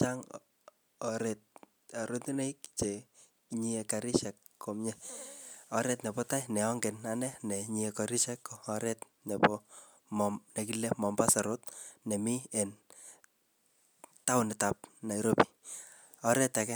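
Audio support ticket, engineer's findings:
No faults found on playback.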